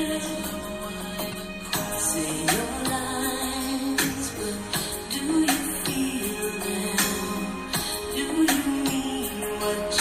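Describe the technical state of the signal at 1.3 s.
At 1.3 s, damaged data in a compressed stream corrupts the sound from 1.30 to 1.34 s. The decoder misreads the broken frames, loses sync and hunts for the next valid header. The result is a brief glitch.

Throughout the clip, the sound is watery. Weak detail flickers on and off. This is likely MP3 compression. The damage is plainly audible and fits a low bitrate of around 64 kbps.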